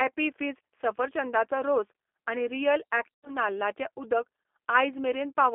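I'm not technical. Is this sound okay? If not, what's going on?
No. The speech went through the G.729 codec, a phone-call compressor. It cuts everything above 3.5 kHz, so it sounds thin, rough and slightly robotic throughout.

At 3.15 to 3.30 s, about 90 ms of sound was lost. This is VoIP packet loss concealed by the speech codec: it fills the gap with a fading buzz or noise, and the voice stays weak briefly afterwards.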